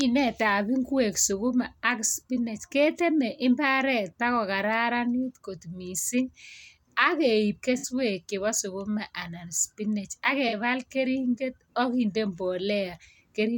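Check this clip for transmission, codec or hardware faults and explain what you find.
There's one problem here, AAC frame loss with concealment, at 7.77–7.87 s and 10.48–10.54 s. The decoder patched roughly 64 ms and 43 ms of missing audio from the last good spectrum, leaving brief smeared, noisy blurs.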